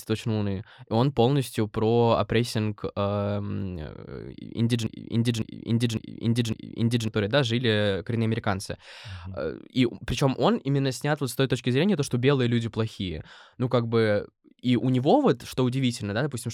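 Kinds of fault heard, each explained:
Broken-record loop: after "про опрессинг эм э", one 0.55 s fragment repeats identically four times, likely a stalled stream resending its last piece, not a brief stutter.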